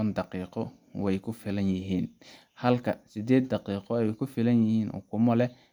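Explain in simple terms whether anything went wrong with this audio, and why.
Nothing went wrong with this speech recording; no technical faults can be heard anywhere in the signal.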